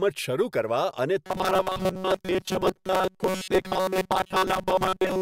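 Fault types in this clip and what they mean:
Robotic sound from repeated short buffers: from 1.26 s to the end, the speech becomes a rigid metallic buzz near 188 Hz, likely because audio arrived too slowly and a roughly 5 ms fragment was looped for most of that stretch, replacing the skipped audio.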